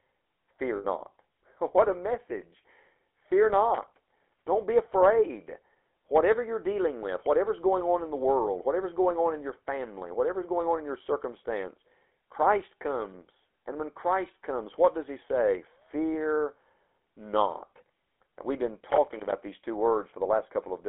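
From start to finish the speech carries the GSM full-rate codec's signature: a buzzy, gravelly texture that comes from the coder modelling the vocal tract and feeding it a sparse, regularly spaced pulse excitation. That texture fits a 13 kbps full-rate coder. The damage is plainly audible. On a spectrogram, energy stops sharply at the top of a 300 Hz to 3.4 kHz telephone band, and harmonics look smeared and grainy rather than cleanly striated.

At 0.76 to 0.85 s, about 80 ms, lost GSM frames interrupt the sound. The decoder repeats the parameters of the last good frame, which fits four 20 ms frames being concealed. It is heard as a brief rough, metallic ring in place of fresh sound. On a spectrogram the region shows a frozen, repeated spectral pattern, and the waveform shows an oddly periodic stretch.

From 18.91 to 19.33 s, between "we've been" and "these two", loose connector crackle breaks in as an irregular burst of scratching. 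A worn or dirty contact is making and breaking rapidly, chopping the signal. The waveform shows jagged dropouts and sharp spikes scattered over that 0.42 s stretch. On a spectrogram these appear as thin broadband vertical streaks.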